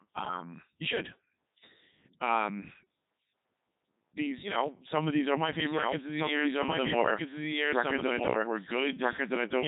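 Throughout the speech, a Codec 2 vocoder has rebuilt the sound. The waveform is gone. Only pitch, voicing, energy and spectral shape survive, resynthesised from sine waves. The result is heavily robotic and buzzy. Nothing remains above 3.8 kHz, which fits the 3.2 kbit/s mode.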